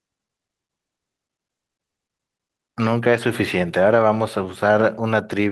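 At about 2.83 to 2.85 s there's a lost packet rebuilt from error correction: one 20 ms packet went missing, and the decoder filled it from the low-bitrate backup copy carried in the next packet. So there's no dropout, just a brief rougher, noisier patch in the speech.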